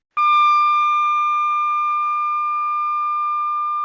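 From the start to about 0.17 s there's comfort noise in place of the background: a flat, featureless hiss sitting about 10 dB below what follows. It's likely discontinuous transmission, with the receiver filling the silent stretch with synthetic noise instead of the real room.

Right at the end of that stretch, from 0.15 to 0.17 s, the onset is clipped by the voice detector. The sound kicks in abruptly with no soft lead-in, likely because those first 20 ms never got sent and filler noise covered the gap. Everything is band-limited to 8 kHz, which fits a G.722 call path.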